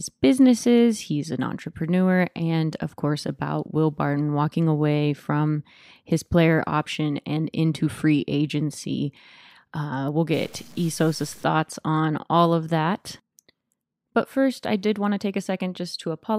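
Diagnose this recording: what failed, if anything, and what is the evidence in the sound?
Stuck bit, 10.34 to 11.44 s: harsh, buzzy distortion, likely from a converter data line held fixed, shifting about half the samples by a step of roughly -40 dBFS.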